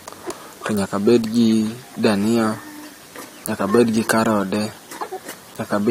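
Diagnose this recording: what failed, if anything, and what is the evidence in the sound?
DECT cordless phone buzz runs under the speech from start to end, a thin steady rasp well below the voice, roughly 30 dB down. It is an analogue wiring problem: the circuit rectifies the 100 Hz radio bursts from a nearby DECT phone or base station. On a spectrogram, evenly spaced horizontal lines appear at 100 Hz and its many harmonics.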